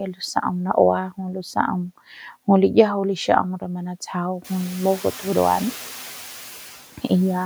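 Noise suppressor artifacts run throughout. The suppressor cuts steady noise by only about 3 dB, so the background dips faintly between words and returns beneath them. Around 4.5 s the room noise rises by about 15 dB, settling about 20 dB below the speech.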